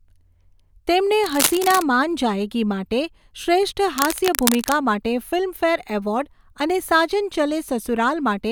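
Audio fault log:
1.23–1.82 s, cable scratch noise: dense, uneven bursts of crackle and rustle sit over the speech just before "માન જાએગી' માટે શ્રેષ્ઠ", only a few dB below the speech. This is likely a worn cable, connector or control being moved, with its contact resistance jumping rapidly.
3.97–4.73 s, cable scratch noise: the same scratchy bursts return just after "માન જાએગી' માટે શ્રેષ્ઠ" at a similar level, pointing to the same intermittent contact.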